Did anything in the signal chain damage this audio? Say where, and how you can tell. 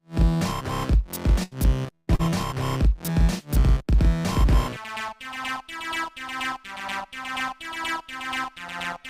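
Yes. Burst of packet loss at 1.43–1.54 s and 1.95–2.10 s: the network dropped 80 ms, then 120 ms, and the receiver stretched the last sound into a fading fill before resuming further on.

Short concealed packet loss at 2.15–2.22 s: another 40 ms never arrived, so the decoder patched it with a brief extrapolated smear that blends back into the real audio.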